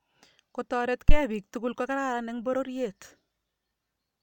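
At 1.09 to 1.15 s, a supply on the live input switches state and the voltage step passes through the coupling capacitors, producing a phantom power thump in the speech: a deep, low thud peaking at about -6 dBFS that dies away within roughly 13 ms.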